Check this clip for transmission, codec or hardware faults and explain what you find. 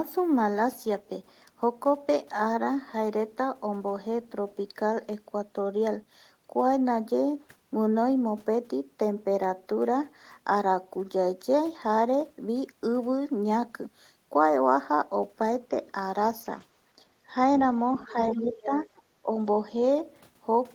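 Two echo-canceller faults appear near the end of the speech, both packed into the last three seconds.

Other side's voice leaking through, from 17.92 to 18.13 s and again from 18.50 to 18.66 s. The likely cause is a far-end signal played on a loudspeaker that the echo canceller failed to fully subtract from the microphone. A faint second voice surfaces in short scraps, first about 25 dB under the talker, then louder, about 15 dB under, in the second burst.

Speech suppressed in double talk, from 18.29 to 18.86 s and briefly from 19.22 to 19.30 s. With both sides talking at once, the canceller likely could not tell the near talker from the echo and attenuated everything. The talker's level dips by as much as about 15 dB, over roughly 0.4 s in the first stretch, overlapping the louder leak, and for a fraction of a tenth of a second in the second.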